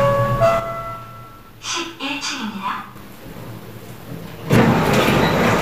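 From 0.60 to 2.96 s, the level of these everyday sounds falls abruptly by about 6 dB. This is likely one channel dropping out. With one stereo side lost, the mono sum keeps only half of the shared signal.

At 2.68, 3.72 and 4.56 s, the sound jumps suddenly forward, with no gap. These are dropped buffers, likely from an overrun. Audio was overwritten before it was read. Roughly 40 ms vanishes at the first, and about 100 ms at each later one.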